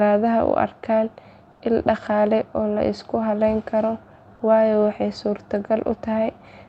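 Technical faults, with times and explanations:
1.51 to 1.59 s, comfort noise in place of the background. For about 80 ms the real room sound, already about 34 dB below the loud parts, turns into a flat, featureless hiss about 4 dB quieter. The sender likely paused transmission during silence, so the receiver filled the gap with synthetic noise.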